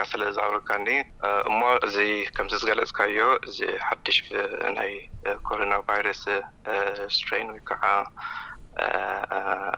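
The resampler restarted on every block, converting each 100 ms chunk in isolation during a doubling from 24 kHz to 48 kHz, so every block edge carries a small error. The audio ticks steadily at 10 Hz throughout, wherever sound is present.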